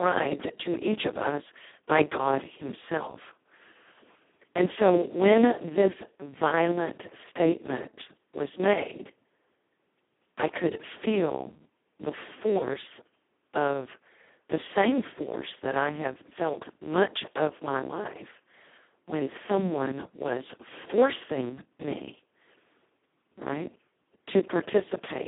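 From start to finish the speech sounds hoarse, buzzy and robotic, with a gritty noise riding on every syllable and a thin, boxed-in tone. Nothing is heard above about 3.8 kHz, and the band sits roughly between 150 Hz and 3.5 kHz. This is heavy Speex codec damage at a very low setting, one that points to around 2 kbps. The excitation gets so few bits that the coding becomes nearly vocoder-like.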